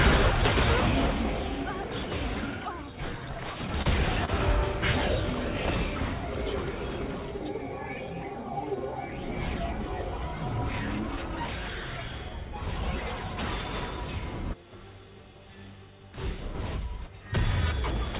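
The audio comes through a narrowband call path with nothing above 4 kHz, which fits G.711 A-law at 64 kbps, and it has two jitter-buffer faults. From 3.22 to 3.87 s there are repeated stalls (stutter): packets arrived late four times, and each time the receiver held the last sound until data caught up. About 63 ms was filled this way, roughly a tenth of that stretch, with the longest hold about 30 ms and nothing lost, so the sound drags and stutters. On a spectrogram each hold appears as a short patch where the spectral pattern freezes into flat horizontal bands. In the waveform, the same few cycles repeat with almost identical shape. Then, from 4.25 to 4.30 s, there is a short stall from a late packet: one packet came about 26 ms late, so the receiver stretched the preceding sound by 26 ms before resuming at the same point. This shows as a brief smeared, held segment in the spectrogram and a slight amplitude dip or repeated periodicity in the waveform. 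Above both faults, the spectrogram has a hard ceiling at 4 kHz.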